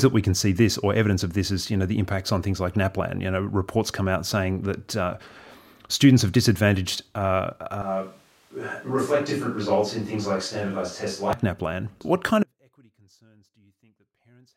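A switch to a distant microphone runs from 7.82 to 11.33 s. The speech abruptly turns roomy and hollow, losing its low end, and drops by roughly 5 dB, while room noise becomes noticeable about 35 dB below the speech. The cause is likely the close microphone's signal failing, so the recording falls back on a pickup farther away that captures more reflections and ambience. At 11.33 s the close, fuller sound returns just as suddenly.

An audio dropout to a faint residue begins at 12.43 s and lasts to the end of the clip. The speech cuts off mid-flow, with no fade, and the remaining time holds only a faint trace of sound, roughly 35 dB below the normal level. This is likely a loss of the wanted signal while the downstream path stayed live, passing only leakage and residual noise.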